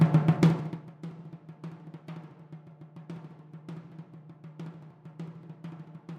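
From 0.34 to 0.94 s, a gain reduction is applied in coarse 2 dB increments with no smoothing between them, producing zipper noise. The level drops by roughly 25 dB in about thirty steps a second, and each abrupt jump leaves a tiny discontinuity in the waveform. The result is a rapid ticking, zipping texture laid over the sound as it fades, stopping once the level settles.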